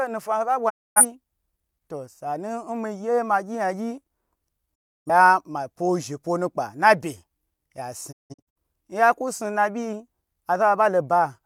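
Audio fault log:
0.68–1.03 s, 4.74–5.1 s, 8.11–8.58 s, digital broadcast dropout: the receiver lost bad frames and muted, which fits six or seven frames each time. About 260 to 300 ms of audio vanishes behind a 20 ms fade, before "ma pwo she pwo" and "nya ku". The last loss breaks into several holes over about 430 ms, the longest 170 ms.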